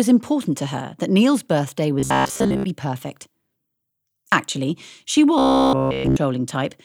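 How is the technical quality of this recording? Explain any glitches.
The speech breaks into robotic sound from repeated short buffers twice, from 2.00 to 2.64 s and from 5.39 to 6.16 s. It becomes a rigid metallic buzz near 66.7 Hz, covering most of the first stretch and all of the second. The likely cause is a tiny piece of audio, about 15 ms long, being replayed while the real audio is skipped.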